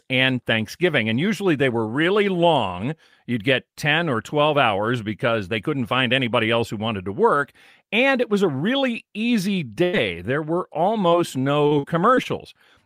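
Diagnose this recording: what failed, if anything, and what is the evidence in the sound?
A held, fading smear from 9.83 to 9.95 s, then the speech resumes further on: a burst of packet loss on the network, about 100 ms concealed by extending the last sound.

A brief smear or wobble from 11.09 to 11.13 s is short concealed packet loss. About 20 ms of speech arrived too late and was patched from the preceding audio.

Choppy speech with pieces missing from 11.67 to 12.27 s comes from repeated packet loss. Four network gaps, the longest 43 ms, left about a fifth of that stretch synthesised.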